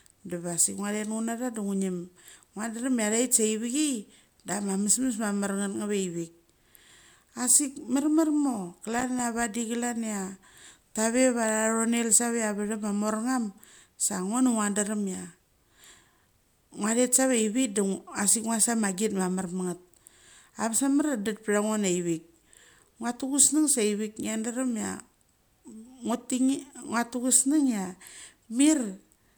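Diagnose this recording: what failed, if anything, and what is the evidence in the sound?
An irregular burst of crackle and scratching breaks into the speech from 8.92 to 9.21 s, about 0.29 s long. This is loose connector crackle in the analogue wiring: a worn or dirty contact repeatedly making and breaking, chopping the signal.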